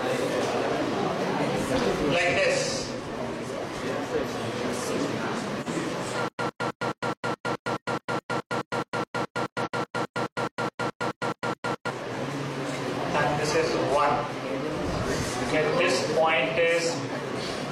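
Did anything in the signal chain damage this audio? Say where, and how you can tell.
Yes. At the codec stage, a corrupt frame decoded at 5.61 to 5.68 s: roughly two frames of damaged data were played as a brief chirpy burst peaking around -25 dBFS. On a spectrogram it shows as a short vertical smear of energy at frequencies unrelated to the surrounding sound.

Stutter with silent gaps runs from 6.28 to 11.90 s. A 104 ms fragment repeats 26 times, each followed by 108 ms of digital silence, for an even 212 ms period. The waveform shows identical blocks separated by flat silent stretches. This is likely a playback stream stalling and replaying its last buffer on each retry.

Compressed frames skipped at 9.62 to 9.68 s. Roughly 50 ms of audio is missing, so the sound jumps ahead. The join appears as a small discontinuity in the spectrogram. This points to the storage or decoder stage.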